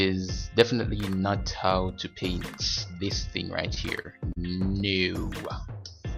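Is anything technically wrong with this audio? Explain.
Yes. Repeated stalls (stutter) occur from 3.59 to 4.38 s. Late packets drained the jitter buffer four times. Held sound fills each gap, so the audio drags and stutters.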